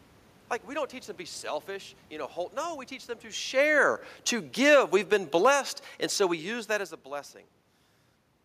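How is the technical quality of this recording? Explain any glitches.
There is one glitch: automatic gain falling, from 4.50 to 5.61 s. The gain control judged the input too loud or its background noise too strong and pulled it down by about 6 dB. Speech and background sink together.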